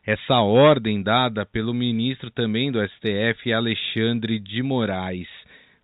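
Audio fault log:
Nothing to log here: the speech just has the usual narrow, phone-line sound of G.711 telephone coding, and no faults turn up anywhere in it.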